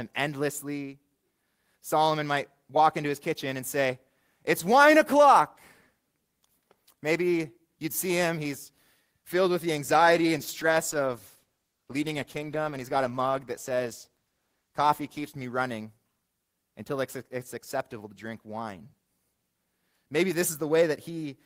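From 9.88 s to 15.51 s a call bitrate drop makes the speech rough and watery, consistent with the encoder falling from about 32 to 14 kbps for roughly 5.6 s. On a spectrogram the upper band thins and smears, with blurrier harmonics until recovery.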